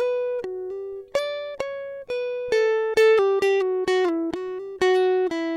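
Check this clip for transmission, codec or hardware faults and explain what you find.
Nothing stood out on listening to this music clip.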